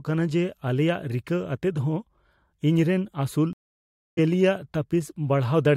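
At 3.53 s the connection dropped and the player had to reconnect, starting a fresh decoder partway through the stream: the speech cuts to about 640 ms of silence, then resumes at 4.19 s roughly 0.7 s further on, so a stretch of speech is simply skipped.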